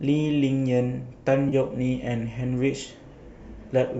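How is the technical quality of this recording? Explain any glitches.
One real glitch in this speech recording: a brief dropout around 1.49 to 1.54 s, on top of the light coding of a likely low-delay AAC stream.

That's AAC frame loss with concealment. About 30 ms went missing, which fits a few lost short frames, and the decoder papered over it from the last good spectrum, so you hear a quick smeared, noisy patch.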